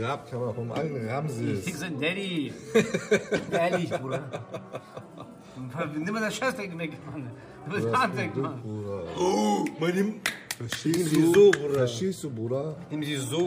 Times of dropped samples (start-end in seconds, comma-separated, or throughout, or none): none